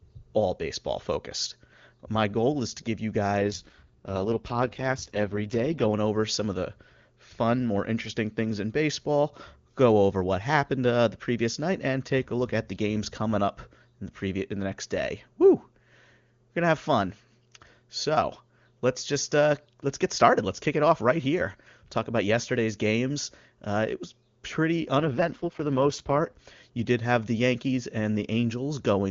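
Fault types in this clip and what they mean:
AMR rate drop: the radio link weakened, and the network told the AMR-WB encoder to switch to a much lower rate, spending bits on error protection instead of speech detail, then restored it. From 3.4 to 5.93 s and again from 24.98 to 26.36 s the speech turns rough, raspy and synthetic, with no gap and no loss of bandwidth. The texture fits a fall from the 23.85 kbit/s mode to the lowest 6.6 kbit/s mode.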